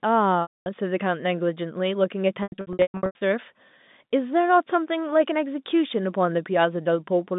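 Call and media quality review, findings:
Packet loss with pitch repetition, 0.42–0.66 s and 2.43–3.21 s: buzzy held tone fading to gaps (longest 240 ms) at the jitter buffer/concealment. Spectrogram shows frozen harmonic stripes; waveform shows repeated decaying cycles.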